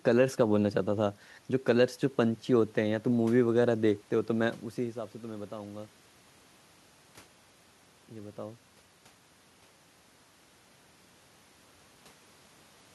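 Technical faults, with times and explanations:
Nothing stood out as a technical problem on listening; the background noise of the room and the change in level around 4.5 s, as the talker shifts relative to the microphone, belong to the recording itself.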